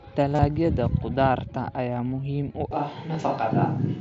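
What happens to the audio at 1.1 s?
Nothing goes wrong at 1.1 s: the speech continues intact there, carried through the Bluetooth mSBC headset path with its usual 8 kHz upper limit.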